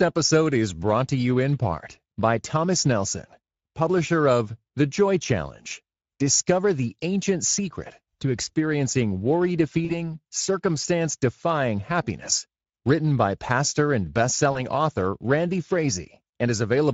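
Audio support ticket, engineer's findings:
Speex codec damage throughout: hoarse, noisy speech from a starved excitation. The top band sounds like shaped noise fill, which points to a mid-quality Speex mode around 17 kbps.

VoIP packet loss concealed by the speech codec at 9.85–9.95 s and 14.51–14.61 s: stretched, fading smear, weak or distorted after recovery. About 40 ms lost each time, fitting two 20 ms frames extrapolated by the decoder.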